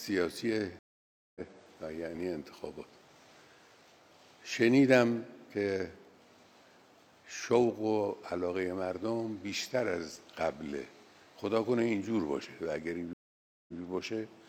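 At 0.79 s the sound drops to silence for 0.57 s, then picks up again at 1.41 s from a point around seven-tenths of a second further on, so a stretch is simply missing. This is a stream reconnect: the connection broke, the player waited, reconnected and started a fresh decoder partway through the live stream. A second stream reconnect at 13.13 s behaves differently: after 0.55 s of silence the audio returns at 13.81 s about 0.13 s earlier than where it stopped, so a short piece repeats because the server resent a burst of recent data.

Between these, two brief bursts of scratchy crackle cut into the sound, at 2.12 to 2.23 s and at 10.10 to 10.20 s, each about a tenth of a second long. This is loose connector crackle: a worn or dirty contact briefly making and breaking as it shifts, chopping the signal on and off in rapid, irregular bursts that come across as ragged crackling.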